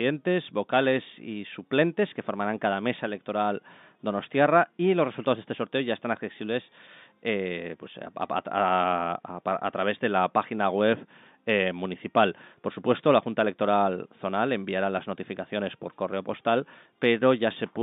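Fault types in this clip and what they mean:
Nothing's gone wrong in this one; it's just speech coming down an ordinary telephone line, with the usual narrow, boxy band you'd expect from a phone call.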